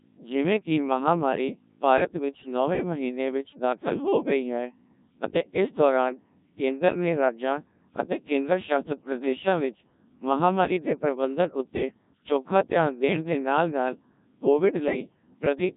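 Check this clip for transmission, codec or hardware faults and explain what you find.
There's one fault, and it runs the whole way through: the speech has been through a Codec 2 vocoder. Rather than keeping the waveform, the decoder rebuilds the voice from sine waves using just pitch, voicing, energy and a rough spectral envelope. That's why it sounds so robotic and buzzy here, with heavy damage that fits a very low rate around 1.3 kbit/s.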